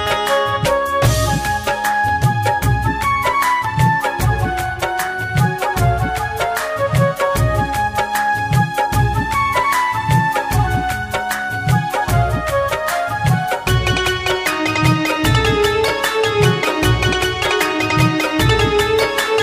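At 3.65 s and 17.45 s the sound jumps forward, skipping roughly 10 ms with no gap of silence, unlike a dropout. This is likely a dropped buffer (overrun).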